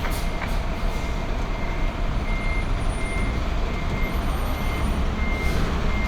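No technical faults are audible.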